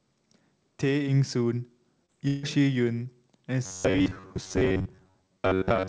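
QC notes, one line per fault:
2.06–2.10 s: short concealed packet loss. About 20 ms went missing. The receiver stretched the preceding sound over the gap, leaving a brief smear.
2.27–2.45 s: long network dropout. The last sound carries on as a fading buzz for about 0.15 s. This is likely lost packets. A few milliseconds are skipped on return.
3.66 s to the end: robotic sound from repeated short buffers. A rigid 94.1 Hz metallic buzz covers most of this stretch. This is likely a roughly 10.6 ms buffer replayed repeatedly.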